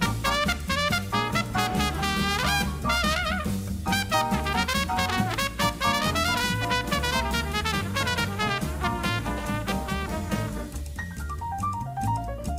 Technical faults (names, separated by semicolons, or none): none